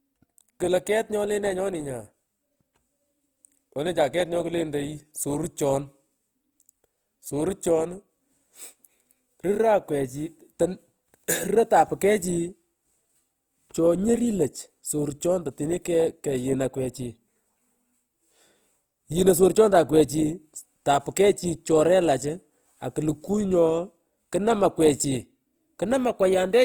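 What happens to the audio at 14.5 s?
Opus compression affects 14.5 s as it does the whole clip. The speech there is grainy and rough, with a noisy edge on voiced sounds. The likely cause is Opus in its CELT music mode at a low rate, around 24 kbps. The encoder preserves each band's energy but, short of bits, fills band detail with folded copies of lower bands or with noise. The full bandwidth survives, reaching about 20.1 kHz, but the fine texture is replaced.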